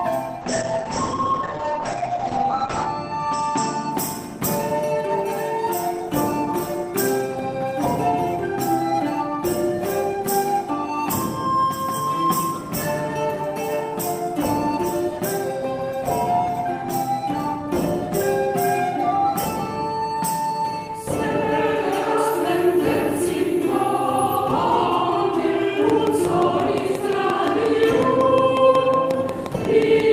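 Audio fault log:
0.43–3.97 s, call bitrate drop: encoding falls from 40 to 9 kbps, band narrows from 20 kHz to 8 kHz for 2.43 s, sounding watery and muffled, unlike plain filtering.
25.9–30.13 s, train of clicks: similar pops at a regular 5.6 per second, about 15 dB above the sound and present in pauses, likely from nearby electrical interference.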